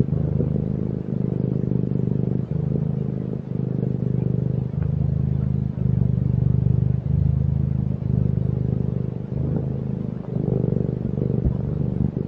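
No technical faults are audible anywhere in the recording.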